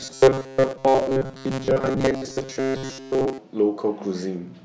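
Audio likely arrived too seldom from the start until 3.38 s, so the playback kept repeating the last few milliseconds for most of that span, which fits a buffer of about 7.5 ms. This robotic sound from repeated short buffers imposes a rigid 133 Hz metallic buzz on the speech.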